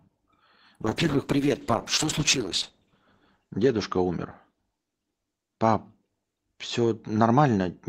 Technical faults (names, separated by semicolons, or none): call bitrate drop